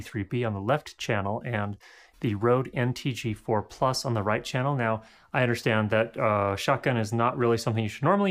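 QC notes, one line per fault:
No faults found in the audio. Nothing in the sound calls for a timed entry.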